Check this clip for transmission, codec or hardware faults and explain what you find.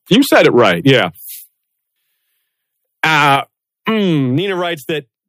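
Two things stand out in this speech: the level overloads twice, and the input volume drops in steps three times.

Microphone overload shows up from 0.12 to 1.0 s and again from 3.04 to 3.36 s. The loudest moments have a crackly, flattened edge, with their tops sheared off. That's likely the microphone input set too high, so the signal pushed past the converter's ceiling, by about 5 dB in the first stretch and about 4 dB in the second. Only a small fraction of the waveform actually gets cut.

Microphone volume stepped down happens at 0.9 s, 3.36 s and 4.38 s. Each time, the voice and the background drop together, abruptly, by about 2 dB, 5 dB and 4 dB respectively. The likely cause is call software seeing a hot or clipping input and pulling the device's input volume down in one step. The first two drops land right at or just after the overloaded stretches. The one at 4.38 s comes on its own.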